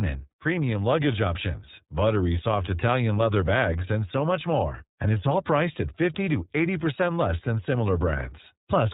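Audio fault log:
throughout, iLBC codec: nothing passes above 4 kHz, and the speech has a plainly rough, synthetic edge, which fits iLBC at 13.33 kbps with 30 ms frames. Unlike a plain low-pass or band-limited line, the coarseness lives in the excitation itself, not just the missing top end.
0.29–0.32 s, lost iLBC frame: a 30 ms gap, consistent with a single dropped frame, is filled by the decoder repeating the last pitch cycle with added noise, giving a brief held, buzzy vowel-like sound. Because each frame is decoded independently, the speech recovers immediately afterwards rather than smearing on.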